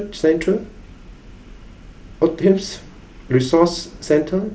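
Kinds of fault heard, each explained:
Nothing here stands out as a fault; it's just speech coming over a wideband Bluetooth headset link, with the top end stopping around 8 kHz the way that kind of connection does.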